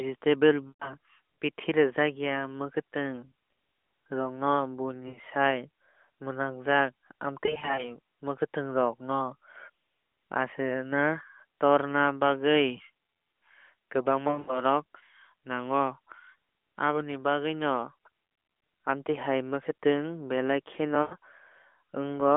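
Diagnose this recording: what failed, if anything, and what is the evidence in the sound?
Network stage: lost AMR speech frames at 0.69, 5.08, 7.46, 14.28 and 21.02 s. The speech smears and fades briefly as the decoder repeats its last good settings.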